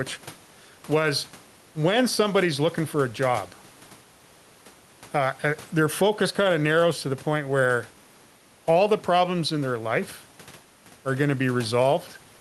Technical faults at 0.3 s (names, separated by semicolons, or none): gain pumping